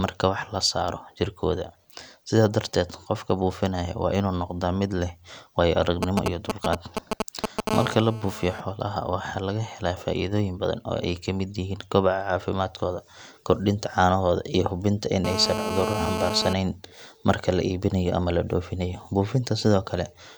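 From 6.03 to 7.69 s there are GSM signalling bursts: a nearby 2G phone pinging the network in short groups, which the audio circuit rectifies. You get a galloping dit-dit-dit of brief 217 Hz buzzes, roughly as loud as the speech.

Right after, from 7.71 to 8.61 s, it turns into steady GSM phone buzz, ending just before "xoolaha waxa laga helaa". That's the phone in a call, bursting 217 times a second, and the circuit demodulates those pulses into a hard, raspy 217 Hz buzz full of harmonics at about 9 dB below the speech. The same buzz returns from 15.25 to 16.53 s, just after "caanahooda iyo hubinta in", louder this time at about 4 dB below the speech.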